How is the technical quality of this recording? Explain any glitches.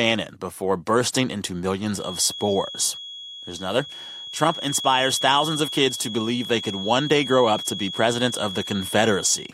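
The recording is marred by a feedback whistle running from 1.91 s, right after "before bursting into", to the end of the clip. A thin, steady 3.3 kHz tone sits about 10 dB below the speech and swells and fades slowly in level. It is likely caused by a loudspeaker-to-microphone loop held just at the edge of feedback. On a spectrogram it appears as an unbroken horizontal line at 3.3 kHz.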